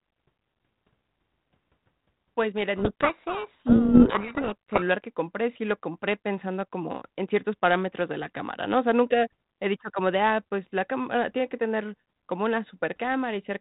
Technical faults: codec payload misread

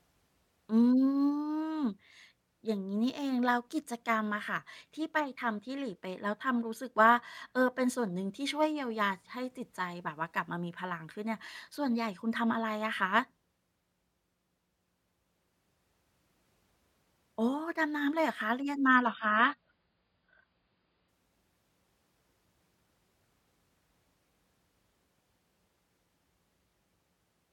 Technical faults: adaptive stream at a lower bitrate

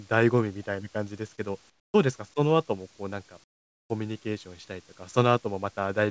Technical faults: comfort noise in place of the background

